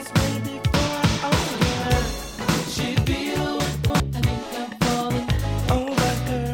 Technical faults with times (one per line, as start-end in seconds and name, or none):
3.60-4.00 chunks out of order